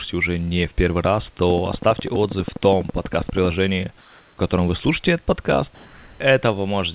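A train of clicks runs from 1.50 to 3.46 s, just after "не в первый раз": about 30 regular ticks at 12.3 per second, peaking roughly 5 dB above the speech. The likely cause is interference or a struggling interface.

Comfort noise in place of the background appears from 4.01 to 4.37 s, a 360 ms gap just before "котором вы слушаете этот", and again from 5.75 to 6.2 s, 450 ms right after that phrase. Discontinuous transmission likely stopped sending during the pauses, so the receiver filled them with steady, featureless synthetic hiss. It is about 2 dB quieter than the real room noise in the first gap and about 2 dB louder in the second. All of this sits in narrowband audio with nothing above 4 kHz, which fits a G.711 call path.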